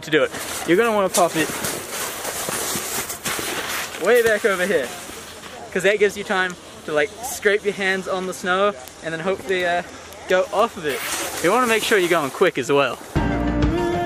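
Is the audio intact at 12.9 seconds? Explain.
No, 12.9 s sits inside a run of word clock ticks from 0.13 to 14.03 s: a receiver clocked roughly 150 ppm off the sender slips a sample about every 0.15 s, giving steady ticks.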